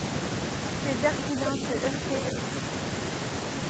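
The clip is speech, and between 1.32 and 1.61 s it shows speech suppressed in double talk. The voice dips briefly and in pieces, a shallow drop of about 5 dB at its deepest. The affected moments add up to roughly 150 ms. The likely cause is an echo canceller hearing both sides at once. It could not tell the near talker from the loudspeaker echo, so it pulled everything down together. Inside that stretch, from 1.46 to 1.50 s, there is also an echo leak. A short scrap of voice arrives 416 ms late and is only a little quieter than the speech itself. This likely comes from a far end playing the call on a loudspeaker. Its canceller missed part of what its microphone picked up and sent that back down the line.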